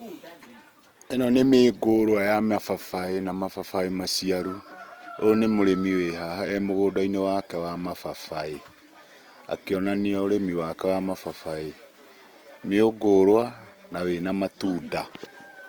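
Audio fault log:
throughout: Opus compression, likely CELT mode near 24 kbps; noise-filled bands make speech grainy, seen as speckled spectrogram texture up to 20.2 kHz.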